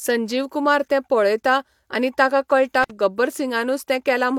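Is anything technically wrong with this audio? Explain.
Yes. From 2.83 to 2.91 s, just after "पळेता आनी ताका कळटा", the speech breaks up with an intermittent contact fault: a loose plug or cable briefly lost its connection, opening the signal path for about 52 ms. The contact scraping open and closed leaves crackle at both edges of the gap. That ragged, crackly onset and release sets it apart from a clean digital dropout, where the sound cuts out abruptly without any scratchy transition.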